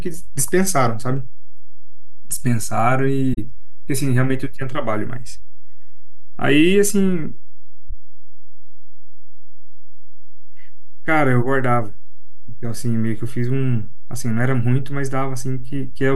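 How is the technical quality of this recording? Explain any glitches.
The recording has two technical faults: a DC offset across the whole speech clip and two brief muted gaps from AAC frame loss.

DC offset: the entire waveform sits shifted away from zero by a constant amount. It is inaudible itself, but it eats headroom and appears as fixed energy at 0 Hz, unlike hum or rumble, which oscillate and can be heard.

AAC frame loss with muting occurs at 3.34 to 3.39 s and again at 7.90 to 7.93 s. The decoder zeroed the missing frames' spectrum, so the overlapping windows fade the speech out and back in. The first hole is about 43 ms, fitting two lost frames. The second is about 21 ms, fitting one. The first is a soft-edged hole and the second a brief dip, which sets them apart from hard sample dropouts.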